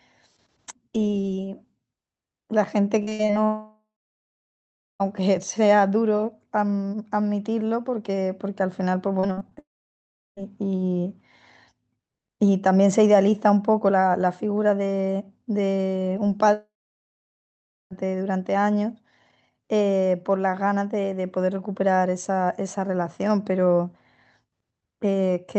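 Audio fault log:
3.03–3.31 s and 9.20–9.59 s: repeated packet loss (robotic sound). Short holes, the longest about 60 ms and 43 ms, are patched by stretching the previous sound, so about half and two-fifths of the spans turn choppy. Unlike a dropout, sound keeps returning between gaps.
3.45–5.02 s, 9.59–10.39 s and 16.53–17.93 s: long network dropout. Audio stops for roughly 1.6 s, 0.8 s and 1.4 s; the last sound buzzes and fades, then about 1.1 s, 0.7 s and 1.2 s of near-silence follow, likely from lost network packets, before speech resumes past the lost part.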